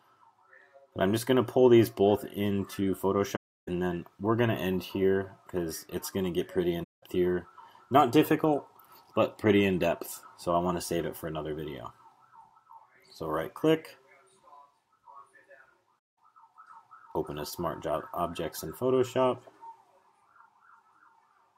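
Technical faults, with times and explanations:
3.35–3.68 s, 6.83–7.03 s and 16.03–16.17 s, AAC frame loss with muting: the audio drops into silence for about 320 ms, then twice for 192 ms, because the decoder zeroed the missing frames. The overlapping transform windows fade each hole out and back in, giving it soft edges.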